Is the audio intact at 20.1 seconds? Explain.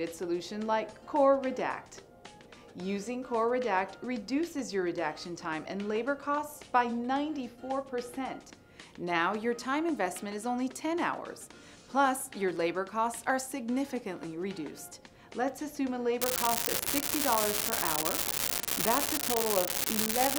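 No. At 20.1 seconds the audio sits inside an unreliable data bit fault that runs from 16.22 s to 20.38 s, where the clip ends. One data line is marginal, so its bit flips wrongly in a random share of samples. Each flip adds a spike of the same size, a step of about -10 dBFS. The result is a steady crackle or fizz. It continues through the quieter moments as well.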